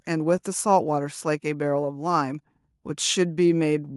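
No technical faults occur at any point in the speech, so there is nothing to describe in time order.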